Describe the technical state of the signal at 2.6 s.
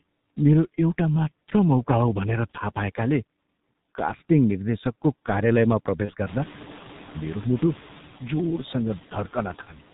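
At 2.6 s the speech sounds muffled and hoarse, with smeared consonants. This is heavy G.723.1 codec damage, present throughout the clip. The coarse sound fits a rate near 6 kbit/s: nothing above 4 kHz survives, and 30 ms frames blur fast detail.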